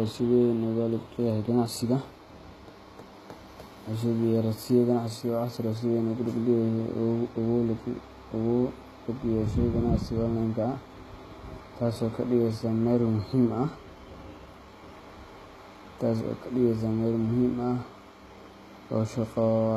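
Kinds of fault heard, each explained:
HE-AAC compression: The speech has a plainly audible coded sound, likely from HE-AAC at a rate around 20 kbps. The upper band is a shaped copy of lower bands, so s sounds turn gritty and lispy. A spectrogram shows blocky, repeated treble texture, with nothing above 14.9 kHz.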